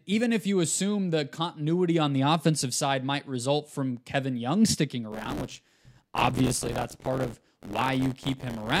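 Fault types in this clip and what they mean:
Buffer tearing: from 5.12 s to the end, write and read pointers cross each period, splicing in older audio and causing an 86.1 Hz buzz, fitting a 512-sample buffer.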